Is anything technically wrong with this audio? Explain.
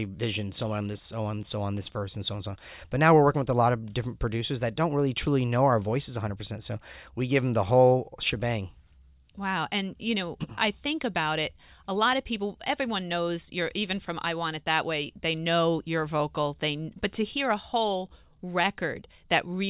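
No, nothing technically wrong turns up anywhere in this speech recording.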